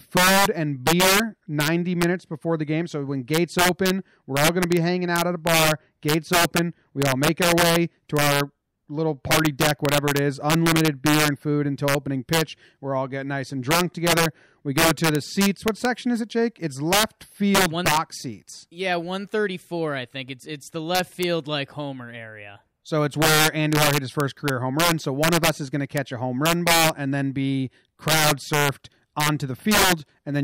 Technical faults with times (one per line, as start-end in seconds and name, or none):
0.00-30.43 integer overflow